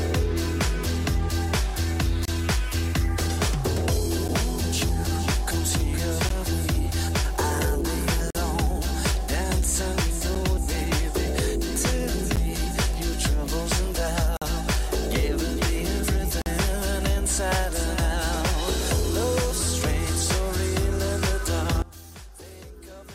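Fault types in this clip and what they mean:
Gap between stream segments: Short hard-edged dropouts to silence cut into the sound at 2.25, 4.28, 6.29, 8.30, 10.35, 12.36, 14.37 and 16.42 s, about every 2 s, lasting from about 10 ms to 48 ms. The regular spacing points to 2-second stream segments whose timestamps leave a small hole at each join. The player fills each hole with silence, so nothing is lost, only interrupted.
One channel inverted: From 21.82 s to the end, the sound suddenly drops by about 19 dB, and only a faint residue remains. The likely cause is one stereo channel with reversed polarity. When the two channels are combined, whatever they share cancels, and only the difference between them is left to be heard.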